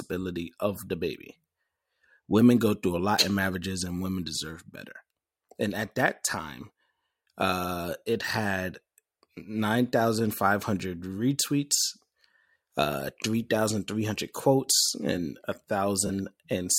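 A corrupt frame concealed at 16.07 to 16.10 s in this speech recording spans about 34 ms, which fits roughly two damaged AAC frames. The decoder detected the bit errors and papered over them with its own fill.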